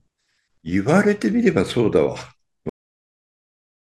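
Speech plays normally until 2.69 s, where it stops abruptly. This is a cut-off end. The sound is interrupted partway through rather than finishing. There is no natural decay and no room tail. The level falls straight to digital silence, which lasts from 2.69 s to the end. The final stretch of audio was never written out or played back. The last buffers were lost before the recording closed, so the closing sound is truncated.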